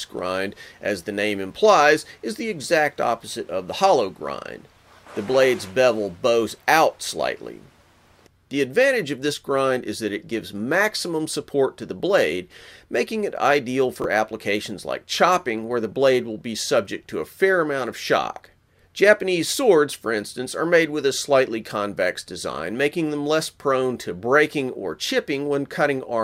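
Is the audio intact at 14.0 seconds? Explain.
No: from 14.02 to 14.05 s, chunks out of order replay a 10 ms chunk two chunks late, giving a jumbled blip with nothing lost, unlike a dropout.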